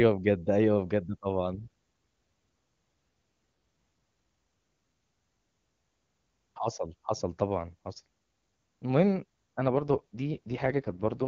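From 9.61 to 11.28 s, an AMR rate drop pushes the wideband codec down to what sounds like 6.6 kbit/s, turning speech raspy and synthetic.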